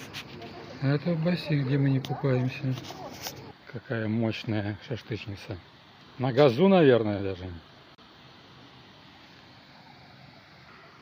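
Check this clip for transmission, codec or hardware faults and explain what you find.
No transmission, codec or hardware faults can be heard anywhere in the clip.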